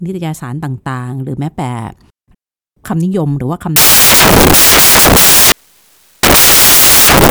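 From 3.76 s to the end, samples are built from the wrong bytes: the low bits become each value's large part, turning the speech into loud, harsh broadband noise, close to white on the louder sounds.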